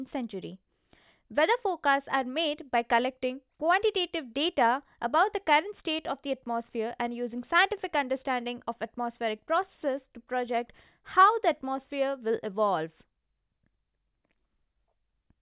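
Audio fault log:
No faults heard.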